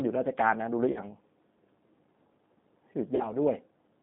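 G.729 coding runs through the whole recording. The speech is rebuilt from a vocal tract filter, a pitch predictor and a few pulses per frame, so it sounds plainly rough and synthetic. The band is confined to about 150 Hz to 3.6 kHz, consistent with an 8 kbit/s link.

VoIP packet loss concealed by the speech codec occurs at 0.92 to 1.0 s and again at 3.16 to 3.34 s. Each time about 40 ms went missing, which fits two lost packets. The decoder stretched its last pitch and filter into a fading buzzy tone or coloured noise, and the speech stays weakened briefly after the packets return.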